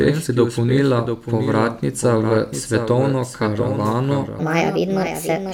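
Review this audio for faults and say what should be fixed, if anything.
Doubled audio track: throughout the speech, a second full-band copy trails about 0.7 s behind the original, about 5 dB quieter, with no decay or room colour. On a spectrogram, each syllable pattern reappears intact, shifted right, and the waveform shows matching envelope shapes. This is likely a second, slower capture path. Route each source through a single capture path so it is recorded only once.

Section at the wrong speed: from 4.39 s to the end at 5.53 s, the speech plays 1.42 times too fast, rising about seven semitones and sounding hurried. A spectrogram shows the harmonics jumping upward and spreading apart, while the waveform's syllable envelopes compress in time. The likely cause is a clock mismatch in editing or playback. Conform every section to the project's sample rate before export.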